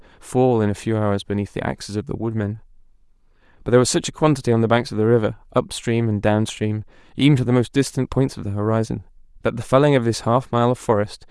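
From the start, this speech clip carries a breathy, grainy edge on the voice, and the top end sounds thinned out and filled in with a hiss-like texture rather than real detail. That's likely Bluetooth LC3 compression: the LE Audio transform codec working at a modest rate, somewhere around 48 kbps judging by the damage, zeroing parts of the upper spectrum and patching them with shaped noise. The 10 ms frame structure fits what you hear.

Around 6.56 s there's a brief blip where the sound goes momentarily smeary and noisy, then recovers straight away. That's lost LE Audio frames. The dropout is short enough to fit a single 10 ms frame going missing. The decoder covers the gap by reusing the previous frame's spectrum with randomised signs, so instead of a hard click you get a quick, fuzzy smudge. The loss was too short for any fade toward silence.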